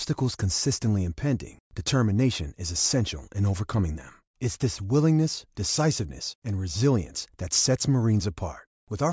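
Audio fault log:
No technical fault can be heard anywhere in the speech recording; the signal stays continuous and intact throughout.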